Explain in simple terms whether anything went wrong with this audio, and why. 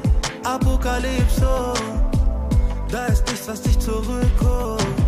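Nothing went wrong here: no dropouts, clicks, distortion or timing glitches can be heard anywhere in the recording.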